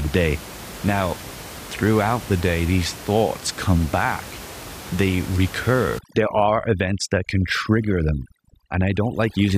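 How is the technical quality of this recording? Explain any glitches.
The recording has one glitch, in its closing stretch, while the room noise sits about 16 dB below the speech. From 5.99 s to 9.57 s, overdone noise removal strips away frequency bands near the noise level, taking quiet speech detail with them, leaving twinkling specks in the background.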